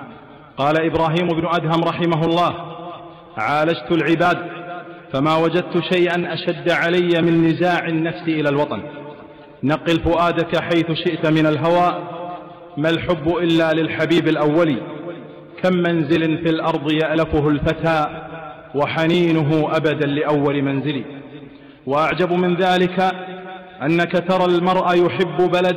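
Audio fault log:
throughout, hard clipping: peaks driven about 5 dB past full scale are sliced flat, roughly 2 percent of samples, giving crackle on loud moments; the waveform shows flat-topped peaks and the spectrogram vertical high-frequency smears.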